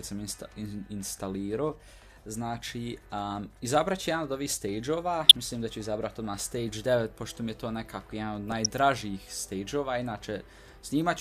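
Two short bursts of burbling sit over the audio, from 5.22 to 5.31 s and again from 8.49 to 8.66 s, the second one longer. This is DAB burbling: under weak reception, a fraction of a percent of bits slipped past error correction into the MP2 stream. Corrupted samples put short blips of noise into single sub-bands.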